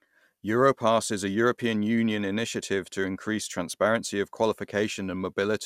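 Generation loss runs throughout this speech. It sounds swirly and hollow, with blurred attacks and nothing above 16.6 kHz. Repeated lossy re-encoding, fitting MP2 at 128 kbit/s about four times, is the likely cause.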